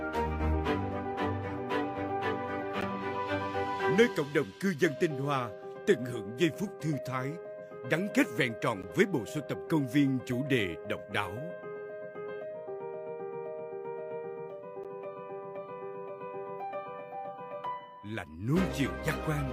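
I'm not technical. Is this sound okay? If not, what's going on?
No. There is a gap between chunks. The audio was handled in six-second pieces, and a tiny silence, about 12 milliseconds, sits at each join. You hear brief, sharp dropouts at 2.81, 8.82 and 14.84 seconds. Nothing is missing, just interrupted.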